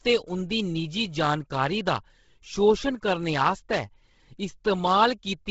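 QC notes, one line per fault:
Throughout: Bluetooth LC3 compression. The speech has a breathy, grainy edge, and nothing is heard above about 7.7 kHz. The damage is heavy. The likely cause is the LC3 codec of Bluetooth LE Audio running at a low bitrate, one that fits roughly 16 kbps. The codec cuts the sound into short frames, which fits 10 ms frames here. It drops much of the upper spectrum and fills the gaps with noise. That noise fill gives the hiss-like texture.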